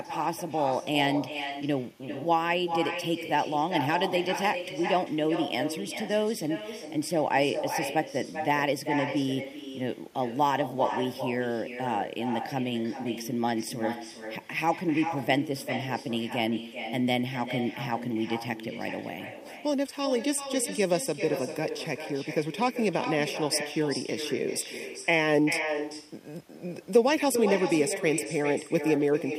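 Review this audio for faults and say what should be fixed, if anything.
Channel delay (comb filtering) runs throughout the clip: one channel lags the other by under half a millisecond and the two are summed to mono, cutting fixed notches from around 1.5 kHz upward and leaving the speech hollow and phasey. Align the channels, or take a single channel, before any mono downmix.

Echo with no canceller also runs throughout: the far end's loudspeaker feeds its microphone, so every phrase returns roughly 0.4 s later as a thinner copy about 8 dB below the speech. Enable acoustic echo cancellation at the far end, or have that side use a headset.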